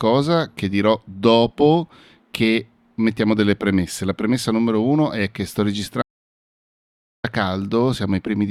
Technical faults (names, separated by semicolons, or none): audio dropout to silence